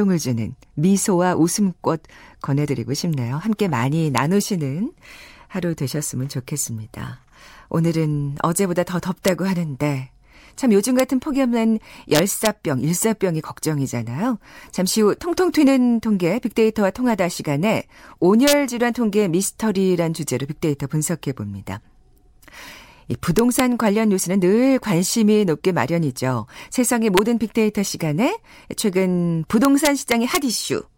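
At 4.18, 9.28, 11.00 and 27.18 s, and over 12.15–12.47, 18.48–18.53, 23.39–23.60 and 29.65–30.37 s, loud speech peaks crack violently: integer overflow. Samples pushed only about 0–2 dB past the ceiling wrap to the opposite sign instead of being limited, so the cracks are harsher than clipping. On a waveform, peaks jump from one rail straight to the other; a spectrogram shows bright broadband vertical streaks at each wrap.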